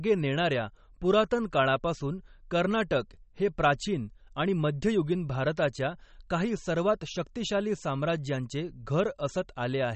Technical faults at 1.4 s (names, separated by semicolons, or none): MP3 compression